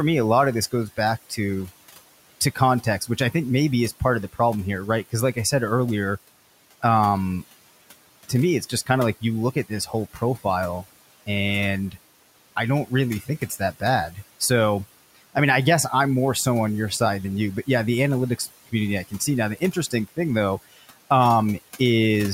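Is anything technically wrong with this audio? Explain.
Yes. The room noise, about 19 dB below the speech, sinks between words and rises back under them throughout. These are noise suppressor artifacts: the suppressor treats steady noise as something to remove and cuts it by about 17 dB, frame by frame.

Speech cut by the noise suppressor occurs five times:

0.72 to 1.71 s, after "a lot of this"
2.55 to 3.34 s, before "maybe is part of"
8.29 to 10.45 s
12.88 to 14.41 s, after "and I don't"
18.38 to 21.11 s

In each stretch, softer parts of the speech turn faint or swallowed. They drop by about 9 to 17 dB, most deeply in the last stretch, and the affected sound adds up to between a tenth and half a second per stretch. The suppressor mistook those quiet parts of the speech for noise and turned them down with the background.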